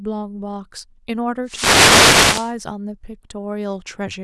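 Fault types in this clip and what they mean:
Wireless microphone noise hit: the radio path of an analogue FM microphone fades as reflected signals cancel, so receiver hiss swells over the speech from 1.44 to 2.54 s as a swish of static. Unlike a digital dropout, the gap fills with noise instead of going silent.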